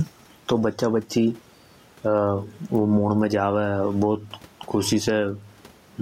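Gain pumping runs through the whole speech clip. The swing is large, somewhere around 15 dB. Loud and quiet passages sit unnaturally close in level, and the speech sounds squashed. The likely cause is input gain set far too high, with a fast limiter clamping down on each peak. The room noise sits about 42 dB below the speech.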